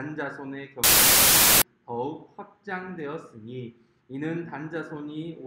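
From 0.84 s to 1.62 s the audio turns into loud, harsh noise with the underlying sound faintly audible beneath it. This is a wrong sample width fault: the bytes are being grouped into samples of the wrong size, which fits 32-bit integer data read as packed 24-bit. Many values straddle sample boundaries, so only some carry the real signal's top bits. The buried sound plays at 0.75 times speed, pitched correspondingly lower.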